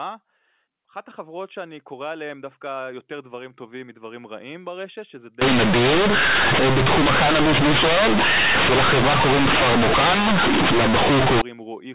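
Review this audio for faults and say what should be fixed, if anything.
Companded audio read as linear, from 5.4 s to 11.4 s: the A-law telephone bytes are being played straight as linear 8-bit samples instead of being expanded first. Each sign change throws the output across roughly half its range, so soft and loud parts of the speech come out equally huge and the waveform is badly warped. The result is harsh, very loud buzzing distortion, with heavy noise filling the pauses. Before 5.4 s the A-law coding decodes correctly, band-limited to 4 kHz. To prevent it, make sure the player tags the stream as A-law and runs it through a G.711 expander before output.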